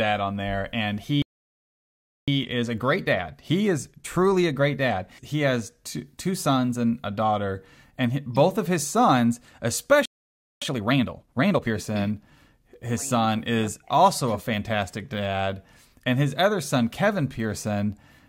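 At 1.22 s, right after "on there and", the speech cuts to silence for about 1.06 s. This is a playback stall, likely the player running short of data. The speech resumes at 2.28 s. From then until 5.28 s, ending just before "has two two sons", time-compressed catch-up plays the speech at 1.1 times normal speed while the player trims its backlog. The pitch stays normal, so it sounds hurried rather than chipmunk-like. A second playback stall, likely from the same cause, silences the audio from 10.05 s to 10.62 s. Harder catch-up at 1.5 times speed follows until 11.74 s, clearly rushed but still at its original pitch.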